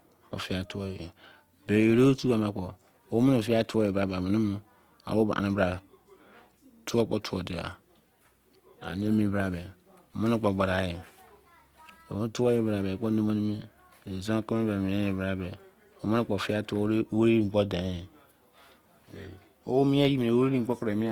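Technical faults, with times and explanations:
Throughout, Opus compression: the speech stays full bandwidth, reaching about 20.2 kHz, but band energies are held while detail is filled with folded or noise content. That leaves it grainy and rough rather than the swirling holes of MP3, likely from an encode near 24 kbps.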